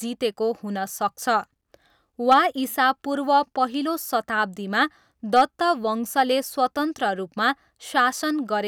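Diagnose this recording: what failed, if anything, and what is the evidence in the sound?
Hard clipping at the converter: peaks overdrove it by about 6 dB at 2.31–2.39 s and about 4 dB at 5.36–5.42 s, flattening speech peaks into brief harsh crackle.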